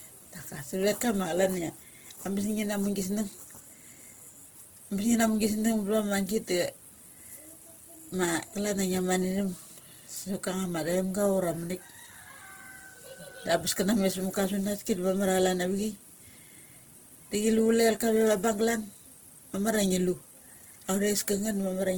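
A speech recording with Opus compression damage running from start to finish, and it is plainly audible. The sound is grainy and rough rather than swirly. The upper band comes across as noisy fill instead of clean detail. Content still reaches about 20.4 kHz, so the band is not narrowed. That points to the codec's music mode, likely starved at a low bitrate near 16 kbps and filling bands with folded or noise energy.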